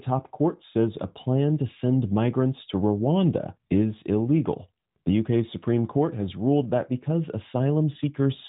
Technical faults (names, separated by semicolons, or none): none